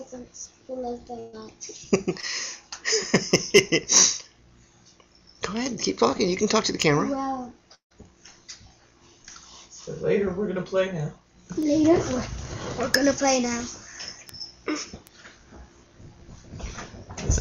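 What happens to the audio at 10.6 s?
Nothing goes wrong at 10.6 s: the audio plays through that moment intact, with no dropout, click, distortion or other audible fault.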